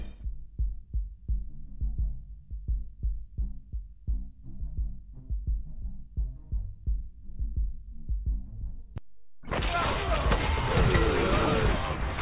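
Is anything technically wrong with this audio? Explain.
No, nothing stood out as technically wrong on listening to this audio.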